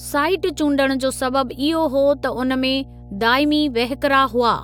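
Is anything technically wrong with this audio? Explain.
Yes. Mains hum runs through the whole clip: a steady 60 Hz tone with low harmonics, sitting roughly 20 dB below the speech. Power-line current is coupling into the signal path, through a ground loop or a nearby transformer, producing a constant low drone under the speech.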